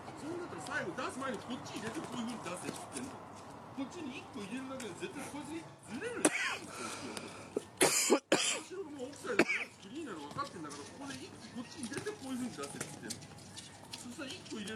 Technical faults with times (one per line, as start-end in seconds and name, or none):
5.68-5.88 AAC frame loss with concealment
13.60-13.68 AAC frame loss with concealment